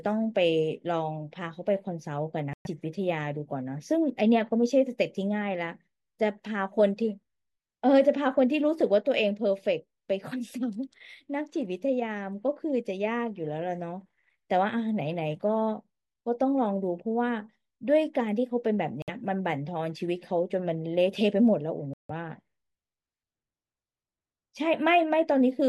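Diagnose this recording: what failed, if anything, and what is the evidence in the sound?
The speech cuts to clean silence at 2.53 s (118 ms), 19.02 s (58 ms) and 21.94 s (159 ms). These are likely Bluetooth stalls at the wireless playback link. They are true gaps with no concealment hiss, as the headphone buffer ran dry awaiting resent packets.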